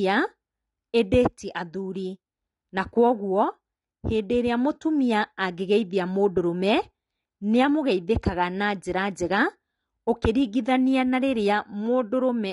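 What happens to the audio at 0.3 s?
At 0.3 s the speech already carries the dull, smeared band-limiting that runs through the whole recording, with nothing above 11.1 kHz and a warbly, fizzy edge on sibilants. The likely cause is AAC compression, with AAC-LC quantising each frame's spectrum so coarsely that the damage fits a bitrate around 32 kbps. A spectrogram would show a hard ceiling at 11.1 kHz.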